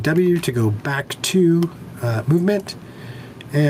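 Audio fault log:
Throughout: gain pumping. The level keeps breathing, dipping when something loud comes in and climbing back up after it, with a swing of roughly 10 dB, so loud and soft parts sit closer together and the whole thing sounds squashed. The likely cause is the input gain set far too hot for the mic, with a fast limiter or compressor clamping down on every loud moment and then releasing.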